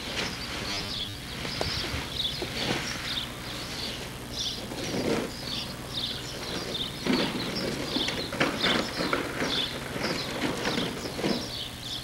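Robotic sound from repeated short buffers runs from 0.63 to 1.14 s: a rigid, metallic buzz pitched at 100 Hz. It is likely caused by audio arriving too seldom, with a segment of about 10 ms repeated to fill gaps, replacing roughly half the real signal.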